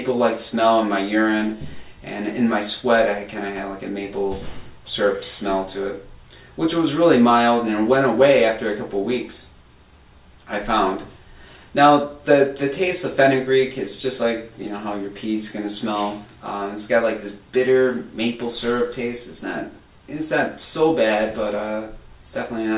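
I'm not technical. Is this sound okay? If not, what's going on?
Yes, nothing stood out as a problem when listening to this sound.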